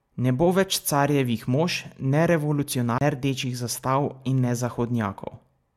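A speech recording with a CD skip from 2.98 to 3.01 s: a tick and a mute of about 30 ms, after which playback resumes from another turn of the disc's spiral. Unlike a plain dropout, the sound doesn't continue where it stopped.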